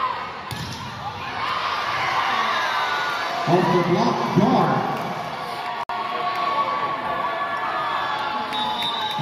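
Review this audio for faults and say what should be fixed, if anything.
Segment timestamps fail to line up, leaving a gap between stream segments. The player fills it with 60 ms of hard-edged silence from 5.83 to 5.89 s, at the 6 s segment boundary. To prevent it, make each segment's start timestamp match the previous segment's end exactly.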